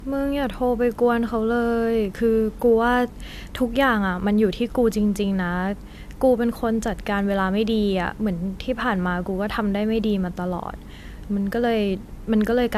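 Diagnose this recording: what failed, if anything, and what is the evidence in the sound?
The fault lies in the codec stage. Throughout the speech, nothing sounds above 14.2 kHz. This is likely low-bitrate audio saved at a high bitrate. The missing band fits a 64 kbit/s AAC source later encoded as high-rate MP3. Re-encoding cannot restore what the first codec discarded.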